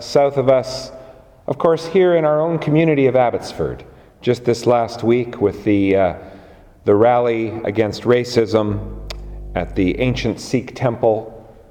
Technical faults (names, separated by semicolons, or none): mains hum